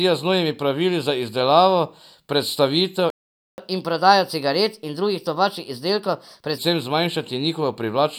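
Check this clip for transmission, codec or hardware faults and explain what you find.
Two related playback faults sit in the middle of this speech clip, one right after the other.

Playback stall, 3.10 to 3.58 s: the speech cuts out in mid-flow for about 0.48 s of silence and then resumes where it stopped. This likely comes from the player's buffer running dry or its output thread being blocked until it recovered.

Catch-up at higher speed, 3.58 to 6.58 s: to recover the lost half second, the player resamples its backlog at 1.15 times normal speed. For those three seconds the speech sounds hurried and raised by about two semitones, then drops back to normal pace and pitch.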